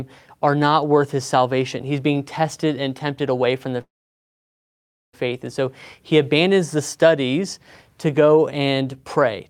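At 3.81 s the speech hits a call audio freeze that lasts until 5.15 s. The last sound trails off briefly, then there's about 1.26 s of silence. Packets were likely held up and the jitter buffer ran dry. The speech resumes right where it stopped, with nothing lost, just pushed about 1.3 s later.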